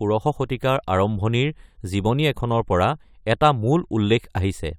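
No technical faults can be heard anywhere in the speech recording, with the signal holding steady and continuous throughout.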